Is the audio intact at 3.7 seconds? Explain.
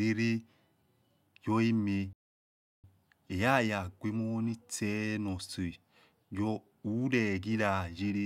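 Yes, the speech is intact at 3.7 seconds, with no audible fault at that moment.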